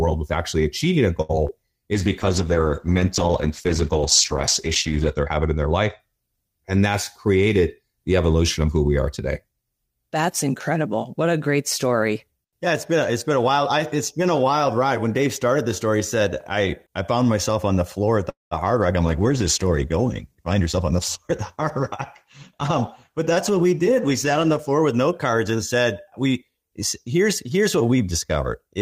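At 1.21 s a short stall from a late packet holds the sound for about 77 ms while the jitter buffer sits empty. Nothing is lost: the speech resumes exactly where it paused, so a sound is simply drawn out with a faint buzz or dip. That sets it apart from the loss that follows.

At 1.47 s a short concealed packet loss removes about 20 ms of real audio. The receiver patches it with roughly 14 ms of extrapolated sound, giving a brief smear or wobble. Unlike the stall, a fragment is actually missing rather than delayed.

From 1.95 s to 6.06 s a call bitrate drop takes the encoder from 40 kbps down to 11 kbps, with the bottom rate holding for about 3.2 s. Audio bandwidth also narrows from 20 kHz to 8 kHz, so the speech becomes muffled and coarse as well as rough.

From 7.28 s to 7.91 s a jitter buffer speed-up plays the speech at about 110% by cutting out pitch periods, around 70 ms in all. The speech sounds hurried, but the pitch stays the same, which separates this from a tape-style speed change.

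At 18.30 s a call audio freeze lasts about 216 ms. A fading buzz or hiss leads into roughly 160 ms of silence, and the speech then resumes with nothing dropped. Held-up packets draining the jitter buffer are the likely cause. It is far longer than the 1.21 s stall and goes fully silent.

From 19.05 s to 24.79 s a second call bitrate drop brings the rate from 40 kbps to 16 kbps. The sound turns grainier, though it is less severe than the earlier drop. Overlapping it, from 20.35 s to 23.73 s, a milder jitter buffer speed-up at about 106% trims about a fifth of a second, and the pace quickens slightly.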